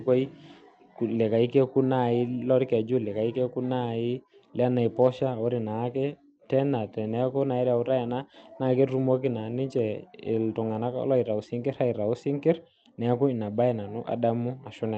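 Nothing here goes wrong at any point; the speech simply comes across as a call would, with the top end rolling off around 8 kHz as the codec's bandwidth suggests.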